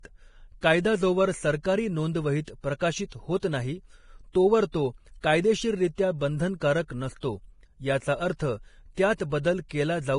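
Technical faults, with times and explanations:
Throughout, Vorbis compression: the speech sounds hissy and grainy, with nothing above 10.5 kHz and roughened, blurred consonants. This is likely low-quality Vorbis coding, which fits a bitrate around 30 kbps, quantising the treble so coarsely that fine detail turns into noise.
7.20 to 7.23 s, pre-echo: a short hiss of about 27 ms arrives just ahead of a sharp onset, which sounds softened. The codec spread its quantisation noise across a whole block, so noise sized for the loud attack leaked into the quiet moment before it.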